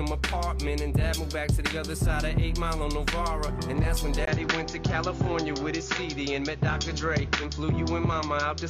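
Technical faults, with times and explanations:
4.25–8.70 s, input switched to a poorer device. A gap of about 20 ms opens at 4.25 s. After it, nothing above 7.1 kHz remains, so the sound turns duller. A new background noise appears, roughly 30 dB below the signal. The overall level stays about the same. The cause is likely a change of input to another microphone or to a headset's call profile, whose narrower band and own noise replace the original path.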